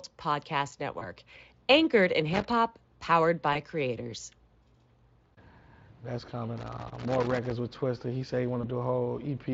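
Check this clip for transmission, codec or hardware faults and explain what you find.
Two faults are present: codec-concealed packet loss three times, and loose connector crackle twice.

VoIP packet loss concealed by the speech codec occurs at 0.99, 3.53 and 8.61 s. Each gap points to a single lost 20 ms frame. The decoder extends the previous sound, giving a brief buzzy smear.

Loose connector crackle runs from 2.33 to 2.45 s and from 6.58 to 7.52 s. A bad contact breaks the signal intermittently, producing irregular scratchy bursts.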